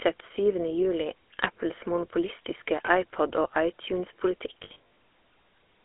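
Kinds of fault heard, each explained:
GSM full-rate codec: the speech runs through the original GSM codec throughout, at 13 kbps and confined to a 300 to 3400 Hz band. It models the vocal tract and excites it with sparse, regularly spaced pulses, which gives the plainly audible buzzy, gravelly roughness.
Lost GSM frames: at 2.86 s a single 20 ms frame drops out. From 4.64 to 4.76 s, 180 ms of losses are spread over about 320 ms, the longest run roughly 70 ms. The decoder repeats the last good frame, producing a brief rough, metallic ring.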